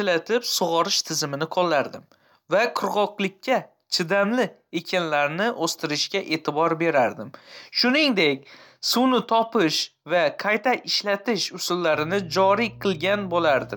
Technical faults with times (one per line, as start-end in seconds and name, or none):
11.95-13.76 mains hum